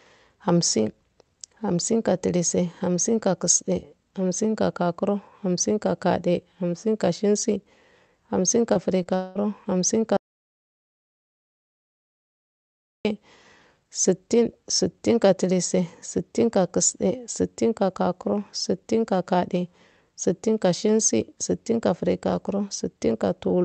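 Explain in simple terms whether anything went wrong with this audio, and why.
Short concealed packet loss at 8.73 s and again at 9.03 s. Each time, about 20 milliseconds of the call arrived too late to be played. The receiving end covered each hole by briefly extending the sound just before it and then blending back into the real audio. You hear a tiny smear or wobble rather than a gap, though a quick consonant at that point may be lost.

Long network dropout from 9.15 to 9.37 s. For about 0.2 seconds nothing came through, and this was likely caused by the connection stalling. The receiver filled the whole stretch by stretching out the last sound into a buzzy or hissy tail that fades, with no true silence. When the real audio returns, whatever was said during that fifth of a second is simply missing.

Audio dropout to silence from 10.17 to 13.05 s, nearly three seconds. The sound cuts off abruptly into dead silence with no background hum at all, then comes back in mid-flow. 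That kind of total silence points to the audio source itself being lost, most likely a disconnected device, a failed link or an accidental mute, while recording carried on writing nothing. Anything spoken in that gap is gone for good.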